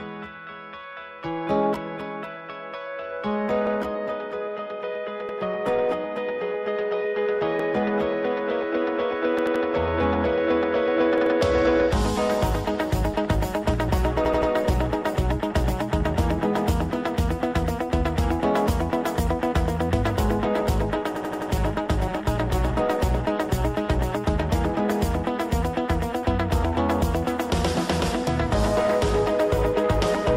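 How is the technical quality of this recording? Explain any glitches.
The recording has repeated stutters from a repeated buffer at 3.67, 5.29, 7.60, 9.39, 11.18, 14.25 and 21.16 s. Late data made the device replay its last 85 ms chunk, which fits a 4096-sample buffer. Each repeat ends in a hard join. At 3.67 s, 5.29 s and 7.60 s the chunk plays twice. At 11.18 s it plays three times, at 9.39 s and 14.25 s four times, and at 21.16 s five times.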